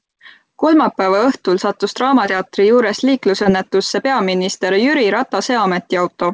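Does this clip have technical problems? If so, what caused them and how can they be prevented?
Yes. Short concealed packet loss occurs twice in this speech, at 2.26–2.29 s just after "õhtul sattus" and at 3.43–3.47 s. Each time about 20 ms of audio arrived too late, and the receiver extended the preceding sound before crossfading back, leaving a brief smear. On a spectrogram the harmonics stretch flat or turn to noise there; a waveform shows repeated cycles with fading amplitude. The call band stops at 8 kHz, which fits G.722. Stabler network routing and a larger jitter buffer would prevent these dropouts.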